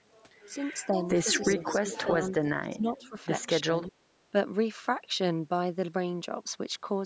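An echo canceller, likely overwhelmed by both sides talking at once, turns the near talker down along with the loudspeaker echo. This is speech suppressed in double talk, and it first appears from 0.88 to 1.71 s as a shallow dip of about 5 dB across roughly a third of a second. From 1.51 to 2.08 s, an echo leak, likely from a loudspeaker whose echo canceller let part of the pickup through, returns a copy of the speech 336 ms late and only about 5 dB below it, heard as a trailing second voice. The suppression then deepens to about 20 dB, gouging out around 0.7 s between 2.05 and 3.15 s and roughly a third of a second between 3.65 and 4.33 s, so the speech sinks away in pieces. The call's microphone processing leaves nothing above 8 kHz.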